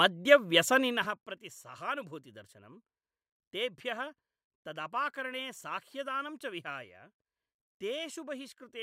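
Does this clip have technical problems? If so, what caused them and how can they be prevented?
No, there are no technical problems to report.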